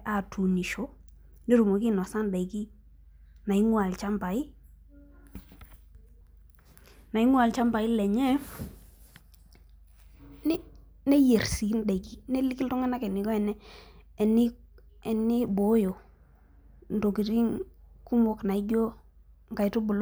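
No technical faults can be heard anywhere in this speech recording.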